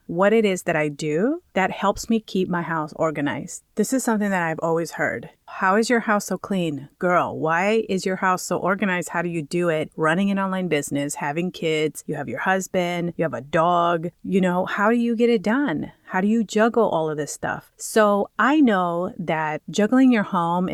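No technical faults are audible anywhere in the recording.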